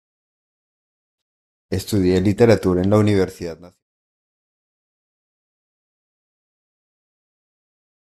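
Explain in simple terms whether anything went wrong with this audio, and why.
Nothing went wrong with this speech recording; the only change is a deliberate, smooth fade-out that begins around 3 s and reaches silence at 3.83 s, with no click or sudden cut.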